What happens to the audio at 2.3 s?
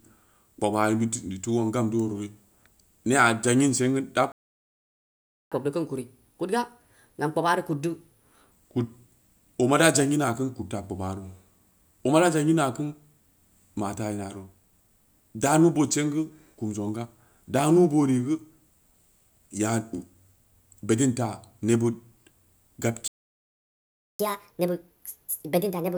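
Nothing goes wrong at 2.3 s: the speech there plays through intact, with no fault to be heard at that moment.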